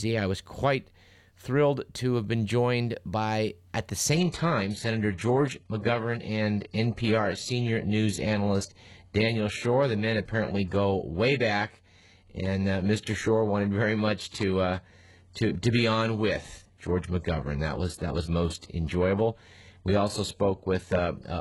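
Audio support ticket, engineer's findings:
Adaptive stream at a lower bitrate, 4.12 s to end of clip. Connection likely slowed and the player switched to a low-rate rendition with no gap. Sound turns abruptly duller and more synthetic, with nothing above 11.5 kHz and heavier codec artefacts. Pattern points to a drop from a high-rate AAC stream to a very low-rate HE-AAC one, with the top band rebuilt rather than coded.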